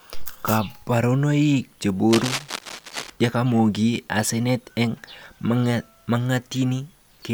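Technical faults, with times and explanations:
2.07 to 3.10 s, cable scratch noise: a worn cable, connector or control was likely moved, making its contact resistance jump about erratically. That injects dense, irregular bursts of noise, roughly 10 dB below the speech, heard as a scratchy rustle laid over it for about a second.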